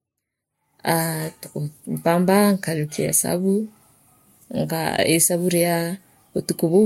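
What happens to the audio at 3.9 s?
At 3.9 s the speech carries the transcoding between lossy codecs artefacts heard across the whole clip. The different codec artefacts are heard together. The likely cause is a first lossy encode re-encoded by a second codec, which fits an MP3 pass near 68 kbit/s followed by Vorbis near 61 kbit/s. The second codec spends bits on the first codec's errors and adds its own. A spectrogram shows nothing above 16.5 kHz, a flat shelf that holds for the whole clip. Below it sit blotchy, holey patches.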